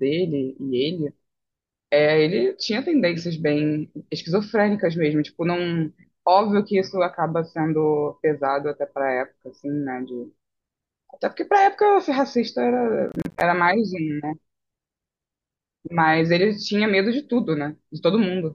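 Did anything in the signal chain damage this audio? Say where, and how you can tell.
Yes. Between 13.09 and 13.41 s the speech is torn by a burst of gritty crackle, the sound of processor overload crackle at the driver and buffer stage. The audio keeps dropping out in rapid, hard-edged gaps of silence, spaced in a way that fits buffers of roughly 10 ms, with about twenty missed in quick succession. The processor failed to fill each buffer before its deadline, so the output held silence instead. The crackle stops once the load clears.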